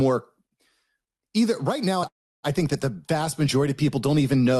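Call audio freeze at 2.07 to 2.46 s: a brief fading buzz, then 0.31 s of silence, likely delayed packets emptying the jitter buffer. Speech resumes where it stopped, nothing lost.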